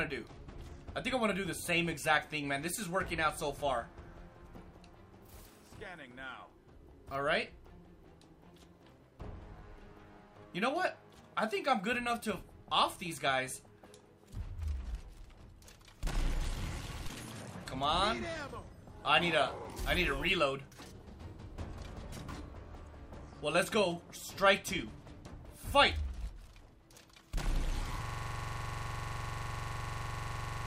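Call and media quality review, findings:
System hang loop, 28.05 s to end: a 42.67 ms chunk repeats as a 23.4 Hz stutter. Computer or driver froze while the hardware kept cycling its ring buffer.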